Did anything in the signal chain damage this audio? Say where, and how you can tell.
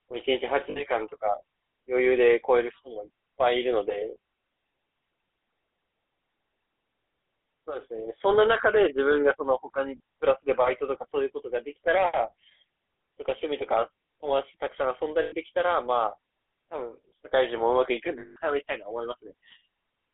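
Yes. Throughout, the speech sounds buzzy and gravelly, confined to a 300 Hz to 3.5 kHz line band. This is codec-stage damage from the GSM full-rate codec, consistent with its 13 kbps coarse pulse excitation.

Brief rough, metallic rings at 0.70–0.81 s, 15.22–15.34 s and 18.18–18.37 s are lost GSM frames on the network. The decoder held the last good frame.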